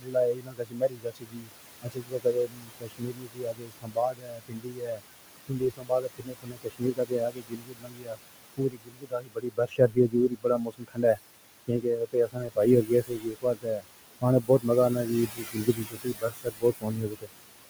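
A speech clip where noise suppressor artifacts run the whole way through. The suppressor pulls the steady background down by about 20 dB, so the room noise, which sits only about 13 dB under the voice to begin with, drops away in the gaps and then surges back up under each phrase. The other problem is speech cut by the noise suppressor: it's mistaking parts of the voice for noise and turning them down along with the background. You can hear this in stretches at 0.0–1.51 s, 1.82–5.02 s, 5.48–8.19 s, 8.57–11.19 s, 11.68–13.86 s, 14.41–14.66 s and 15.27–17.3 s, with the deepest dips reaching about 22 dB (about 17 dB in the short 14.41 s one). Within those spans, somewhere between a fraction of a second and a few seconds of material gets swallowed, so softer consonants and word endings go faint.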